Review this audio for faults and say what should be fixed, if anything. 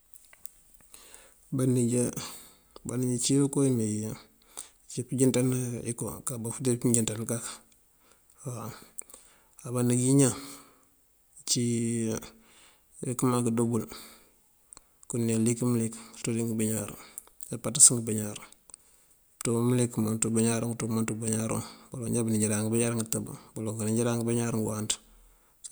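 Nothing stood out on listening to this speech recording, so there is nothing to fix.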